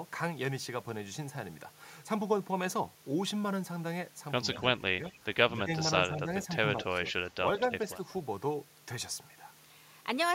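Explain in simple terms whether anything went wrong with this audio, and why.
Echo leak, from 4.54 to 6.46 s and again from 7.06 to 7.96 s: a faint, delayed copy of the speech trails about 180 ms behind it. One caller was likely on a loudspeaker, and their phone failed to cancel everything its microphone picked up, so that sound was sent back.

Speech suppressed in double talk, from 4.79 to 6.29 s and from 6.86 to 7.61 s: the main speech briefly dips in short patches. When both sides spoke at once, the echo canceller likely couldn't tell the real talker from the echo and turned both down.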